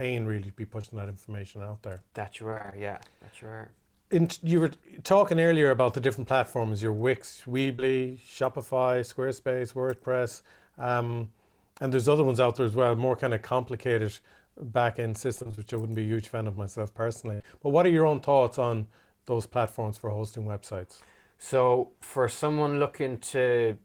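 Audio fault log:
0.81–0.95 s, 7.76–7.80 s, 17.42–17.45 s: short concealed packet loss. About 20 ms goes missing each time. The decoder extends the preceding sound, leaving a brief smear or wobble.
2.50–2.74 s and 15.36–15.60 s: repeated packet loss (robotic sound). Six gaps of up to 20–26 ms are patched in quick succession. Nearly half of each span is filled in, so it sounds choppy with pieces missing.
17.34–17.42 s: burst of packet loss. About 60 ms is lost at once. The last sound is held and faded down, then the speech resumes with that piece gone.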